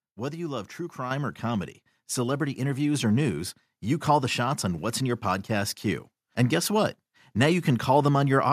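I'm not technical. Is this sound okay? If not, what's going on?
No. At about 1.11 seconds the microphone volume stepped up: the calling software decided the microphone was too quiet and turned its input level up all at once instead of gradually. Because this happens at the microphone itself, everything it picks up gets louder together. The speech and the background noise both jump to a noticeably higher level at that moment and stay there, so the clip sounds like someone suddenly nudged a volume knob.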